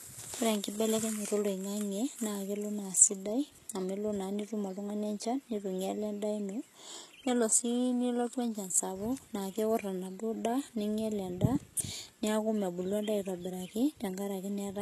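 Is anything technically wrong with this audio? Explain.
Yes. Throughout the speech, the treble sounds rebuilt rather than captured, most likely from HE-AAC compression at a rate that fits roughly 16 kbps. Only the lower band is coded; the upper band is copied up from it, so s sounds turn gritty and lispy. A spectrogram shows smeared, repeated-looking upper bands and nothing above 12.3 kHz.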